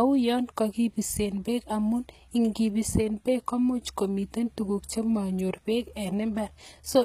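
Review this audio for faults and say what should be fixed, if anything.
Throughout the speech, the treble up to 14.9 kHz is bright but gritty and lispy, likely HE-AAC compression copying lower bands upward at a low bitrate. Plain low-bitrate AAC would sound dull instead. Encode at a higher bitrate with full-band AAC to keep the original treble.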